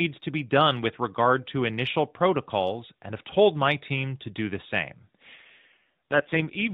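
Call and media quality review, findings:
AMR rate drop: rougher, synthetic speech from 5.36 s to end, after "to do the same"; no gap. Weak-link mode switch, fits 12.2 to 4.75 kbps.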